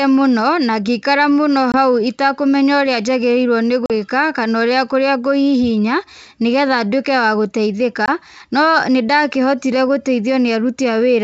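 Speech carried over a G.722-style wideband link has packet loss on an ADPCM call at 1.72–1.78 s, 3.86–3.91 s and 8.06–8.09 s. Each is a hard-edged silent hole of about 20, 40 and 20 ms, a packet or two. Unlike a plain dropout, the speech resumes slightly distorted, because the decoder's predictor and step size briefly disagree with the sender's.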